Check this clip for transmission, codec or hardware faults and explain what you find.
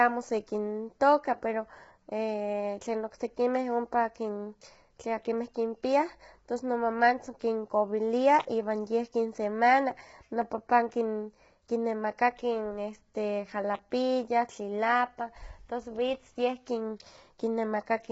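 One fault runs through the whole clip: heavy low-delay AAC compression. The speech sounds rough and grainy, with a noisy fill between the pitch harmonics and nothing above about 7.7 kHz. The likely cause is AAC-ELD, the low-delay codec used for video calls. Its short frames separate closely spaced harmonics poorly and spend bits inefficiently, so at a rate that points to around 16 kbps the encoder smears the harmonic detail into noise and discards the top band.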